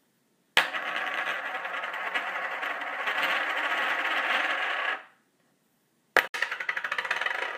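A recording of everyday sounds, and there's one glitch near the end: a short hole from about 6.27 to 6.34 s where the audio just drops to silence, roughly 60 ms of it. When it comes back, it picks up further along rather than where it stopped, so that slice is simply gone. That points to a Bluetooth dropout, likely a few packets that didn't reach the headphones in time and were discarded.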